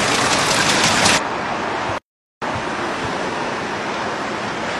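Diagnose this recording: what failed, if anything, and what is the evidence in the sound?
A playback stall interrupts the sound at 1.98 s, and the output stays silent until 2.42 s, a gap of about 0.44 s. On the waveform this is a flat, empty stretch cutting straight through ongoing material. A spectrogram shows a clean vertical band with no energy at any frequency. The cause at the playback stage is likely that the player ran out of data or its thread was blocked, so nothing reached the output until it recovered.

Damaged data in a compressed stream shows up at 4.65 to 4.70 s, a disturbance of about 56 ms near the end. At the codec stage, corrupted bytes in the stream make the decoder misread or reject the affected frames, lose sync and hunt for the next valid frame header. Depending on what it outputs meanwhile, the result is a brief chirp, squawk, click or hole. On a spectrogram it appears as a short, sharply bounded patch that breaks the surrounding pattern. 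The waveform shows a matching discontinuity.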